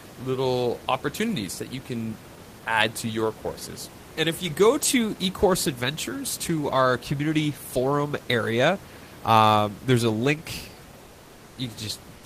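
From 11.05 to 11.53 s, during a pause in the speech, the background turns into a flat, featureless hiss about 2 dB quieter, and the detail of the room noise disappears for roughly half a second until the sound resumes. This is comfort noise in place of the background. The likely cause is discontinuous transmission, consistent with Opus DTX: the sender stopped transmitting once it detected no speech, and the receiver filled the 480 ms gap with synthetic noise.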